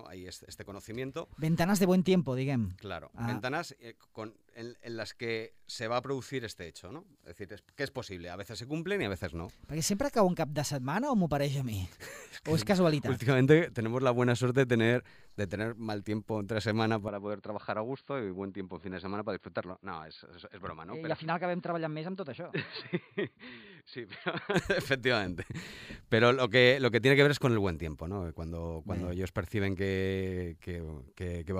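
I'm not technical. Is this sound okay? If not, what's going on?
No. From 17.08 to 24.54 s the sound turns dull and boxy, a bit quieter, and loses everything above about 4.7 kHz, then clears again. That's likely an input switched to a poorer device, like a headset mic taking over, with no gap at the switch.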